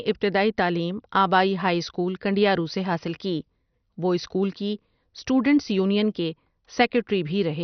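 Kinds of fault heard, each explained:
MP2 compression: The speech sounds dull and gurgling throughout, with a grainy, watery distortion on every phrase. Nothing is heard above about 6.1 kHz. The upper range is simply gone. The damage is heavy. This is likely MPEG Layer II coding at a very low rate, which fits about 48 kbps. Starved of bits, the coder switches off its upper sub-bands. The bands that remain are coarsely quantised and flicker, giving the granular texture.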